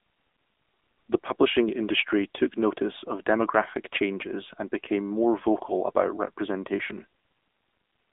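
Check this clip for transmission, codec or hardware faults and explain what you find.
One fault runs through the whole clip: AMR narrowband mobile codec. Speech sits in a 250 Hz to 3.6 kHz band with nothing above 3.7 kHz, and its plainly buzzy, synthetic texture, which fits a low mode near 8 kbps, separates it from plain telephone band-limiting.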